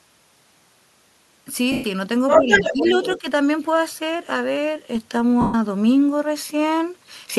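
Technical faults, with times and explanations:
1.72 to 1.84 s and 5.41 to 5.54 s, lost LE Audio frames: The sound breaks into a noisy smear for 120 ms, then 130 ms. Each gap fits about a dozen lost 10 ms frames. The decoder kept replaying the last spectrum with random signs and faded it.
2.28 to 3.19 s, other side's voice leaking through: A second voice comes through alongside the talker, about 5 dB louder than the speech. This is likely loudspeaker playback that the echo canceller failed to remove from the microphone. It reaches the listener as leaked echo.
2.38 to 2.96 s and 3.18 to 3.24 s, speech suppressed in double talk: The talker's voice dips by roughly 10 dB while the other side speaks. It affects about 400 ms in the first span and about 70 ms in the second. The echo canceller likely could not separate the two voices, so it turned both down.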